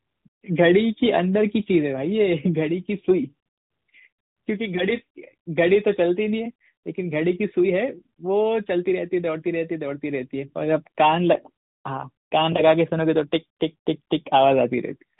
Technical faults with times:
none

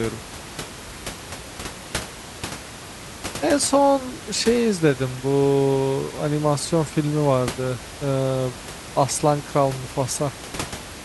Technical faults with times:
none

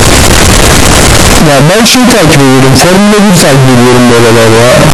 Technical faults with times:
0.00-4.94 signed and unsigned mixed up

